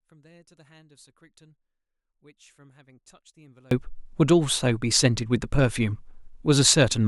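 From the start to 3.71 s, the speech drops by about 34 dB when heard in mono, leaving only a faint residue. The likely cause is one channel inverted: with one side's polarity flipped, the material common to both channels cancels on summing. On a waveform the mono sum sits near flat until 3.71 s. A spectrogram shows the low end and centred speech energy almost gone there, then full-level bands returning abruptly.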